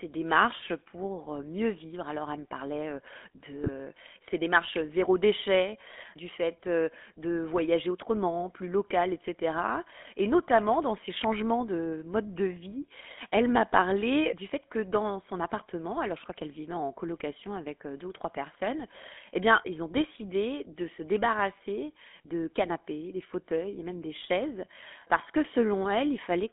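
The whole clip of speech carries the GSM full-rate codec sound, a buzzy, gravelly roughness that fits the old 13 kbps full-rate coder. The vocal tract gets rebuilt from a sparse pulse train, and the line band sits at roughly 250 Hz to 3.5 kHz, so the top end is gone.

Then there are two short bursts of GSM bit errors. The first runs from 3.64 to 3.69 s, right before "ses démarches zéro déchet". The second runs from 20.99 to 21.03 s, just after "ont décidé de se". Each is a brief squawk-and-gargle, and each points to a couple of frames whose filter, pitch or gain values arrived corrupted.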